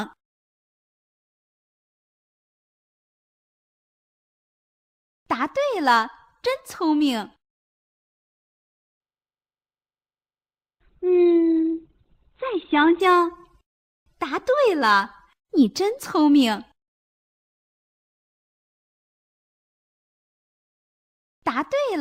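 The audio has one fault: an adaptive stream at a lower bitrate between 9.00 and 13.00 s. At 9.00 s the quality drops abruptly, with no gap. Nothing above 4.5 kHz survives, and coding artefacts become audible. The connection evidently slowed, so the player switched to a lower-bitrate version, consistent with a step from about 64 kbit/s down to around 12 kbit/s. At 13.00 s full bandwidth returns just as suddenly.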